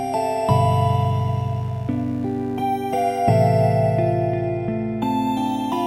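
From start to finish, computer activity noise sits beneath the sound: a faint buzzy chirping at roughly 70 pulses per second, about 35 dB below the signal, as processor and graphics load swings disturb the shared ground. A spectrogram shows comb-like vertical striations unrelated to the audio's own content.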